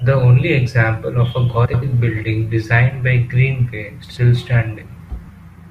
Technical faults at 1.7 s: frames out of order

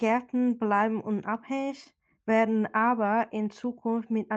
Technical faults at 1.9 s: scattered short gaps

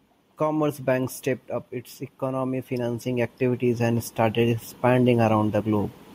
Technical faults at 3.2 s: automatic gain rising

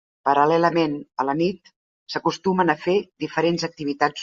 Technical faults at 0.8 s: none

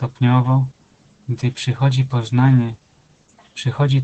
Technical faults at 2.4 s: Opus voice compression

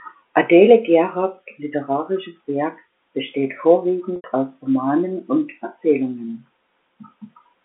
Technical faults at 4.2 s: packet loss with pitch repetition

